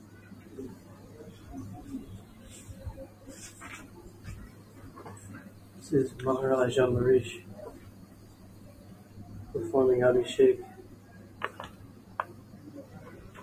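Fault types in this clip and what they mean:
Noise suppressor applied to music or sounds: a speech-oriented noise reducer was left running on material it wasn't built for, so anything sustained or ambient gets mistaken for noise and pulled down. You hear it across the whole clip. Sharp onsets get through fairly intact, but held parts and decaying tails sink by something like 15 dB, so the sound keeps pumping and fluttering and feels thinned out.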